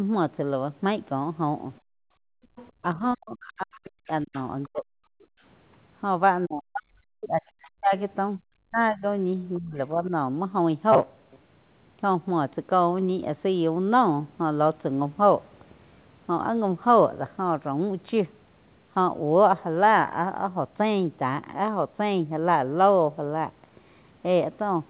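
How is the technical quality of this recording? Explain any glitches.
The recording has clear echo-canceller trouble in its first ten seconds and one short burst of buffer repetition after that. The whole clip is band-limited to about 4 kHz, consistent with a narrowband telephone-grade call codec such as G.711.

Background gated by the echo canceller: at 1.81 to 2.52 s and again at 5.32 to 5.39 s, the echo canceller judged that the loudspeaker was active and clamped the microphone hard. The room tone falls by about 34 dB across roughly 700 ms in the first case, and by about 31 dB for 70 ms in the second. Both times the background simply vanishes and then snaps back when the canceller releases.

Other side's voice leaking through: at 2.56 to 2.70 s, 4.34 to 4.66 s and 7.62 to 7.68 s, faint scraps of a second voice come through. They are about 25 to 30 dB below the main speech. This is likely residual loudspeaker echo that the canceller failed to subtract from the microphone signal, so pieces of the far end ride along underneath.

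Speech suppressed in double talk: from 2.80 to 5.04 s and from 6.46 to 10.12 s, the main speech repeatedly dips and breaks into pieces, at its worst dropping by around 40 dB. Roughly one and a half seconds of the first span is affected, and about two seconds of the second. The likely cause is both sides talking at once. The canceller could not tell the near talker from the echo, so it attenuated everything.

Robotic sound from repeated short buffers: between 10.92 and 11.36 s, the speech turns into a rigid metallic buzz at 133 Hz, which fits a repeated chunk of about 7.5 ms. The likely cause is audio arriving too seldom. The receiver filled the gaps by looping the last short buffer, so about half of that stretch is repetition rather than real signal.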